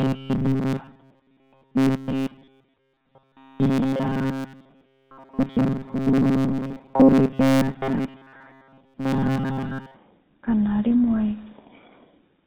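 From start to end the speech carries the sound of the GSM full-rate codec. Its damage is plainly audible. This codec models the vocal tract and drives it with a sparse train of regular pulses, so fine detail in the excitation is lost. Nothing above 4 kHz survives. The result is a thin, band-limited voice with a buzzy, gravelly roughness. The quality fits the 13 kbps GSM full-rate codec.

From 0.01 s to about 9.98 s, a robotic sound from repeated short buffers sits on top. The voice becomes a rigid, metallic buzz at 134 Hz. It still roughly follows the speech. The likely cause is audio arriving too seldom, with software repeating the last short chunk to fill the gap. A 134 Hz buzz points to chunks of about 7.5 ms. Most of the audio in this stretch sounds repeated rather than new.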